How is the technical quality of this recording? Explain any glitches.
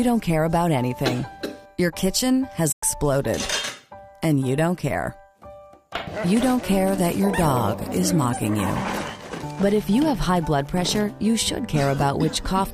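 The audio has one dropout. From 2.71 to 2.83 s the sound fades briefly to silence and back: AAC frame loss with muting, the decoder zeroing roughly 0.11 s, which fits about five lost frames.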